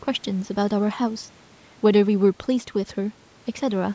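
No technical faults are audible.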